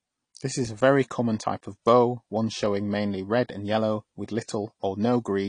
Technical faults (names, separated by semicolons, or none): AAC compression